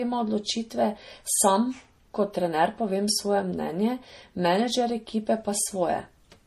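Throughout, the speech has nothing above 15.1 kHz and layered smearing and swirly artefacts, likely from transcoding between lossy codecs, consistent with low-rate MP3 re-encoded as Vorbis.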